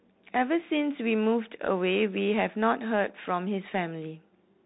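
From start to finish the speech carries Bluetooth CVSD headset codec damage: one-bit up-or-down coding with an adaptive step leaves a granular hiss and scratchy sibilants, consistent with a 64 kbps link. A spectrogram shows everything cut off above 3.8 kHz, and the waveform looks fuzzy and grainy.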